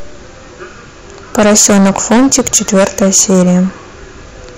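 From about 1.35 s to 3.60 s the speech runs into hard clipping. It's being pushed roughly 17 dB past what the stage can pass, so the peaks get chopped flat, throwing off high harmonics. You hear a harsh fuzz riding on every louder syllable.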